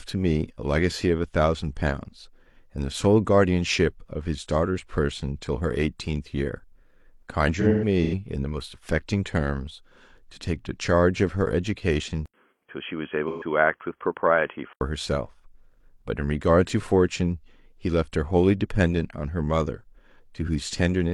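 From 7.60 to 8.14 s the speech turns smeared and noisy in patches, as AAC frame loss with concealment fills about 256 ms of missing audio, scattered over roughly half a second, by reusing the last good spectrum. The longest gap runs around 150 ms.

At 12.26 s an 80 ms silence is followed by dull, boxy speech with nothing above 3.3 kHz and a faint new noise floor about 55 dB down, though the level barely changes. This lasts until 14.81 s, and the likely cause is an input switched to a poorer device.

Within that stretch, from 13.27 to 13.43 s, another 128 ms of frame loss with concealment brings a brief phasey smear.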